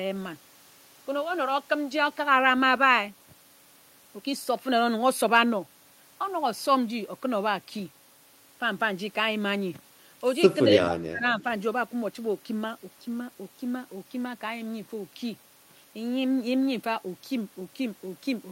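From 10.73 to 11.45 s the speech drops by about 30 dB in pieces: likely speech suppressed in double talk by the echo canceller.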